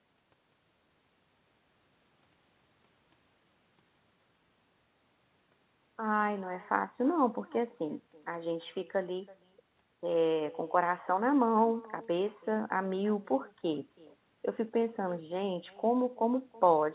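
From start to finish the speech carries an echo with no canceller: the far end's loudspeaker leaks back into its microphone, so every phrase returns roughly a third of a second later as a faint, thin copy about 23 dB down, squeezed into the call path's band that stops at 4 kHz, which points to G.711 mu-law.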